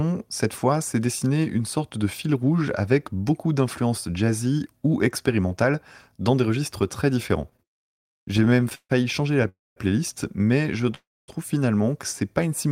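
Just after "des registres très différents", from 7.49 to 8.91 s, the audio shows repeated stalls (stutter). Packets arrived late, so the jitter buffer kept emptying. The receiver stretched the last sound across 19 short gaps, the longest 145 ms. Nothing is lost, but the delivery drags.

Two call audio freezes follow. The first runs from 9.48 to 9.78 s, before "playlist mais". The second runs from 10.95 to 11.30 s, before "finalement que c'est pas". Each is a held tone fading into silence, lasting 279 ms and 332 ms. The likely cause is delayed packets starving the buffer.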